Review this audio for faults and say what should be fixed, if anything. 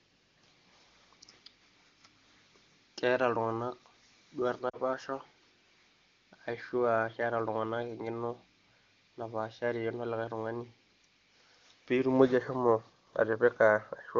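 Lost AMR speech frames at 4.69 to 4.77 s: about 40 ms, which fits two 20 ms frames. The decoder repeats the last good pitch and vocal tract settings at falling gain, so the sound briefly fades to near silence. On the waveform this shows as a short amplitude sag. On a spectrogram the harmonics go flat and fade before normal speech resumes. Better radio coverage or stronger error protection on the link would stop these frames from failing their checksum.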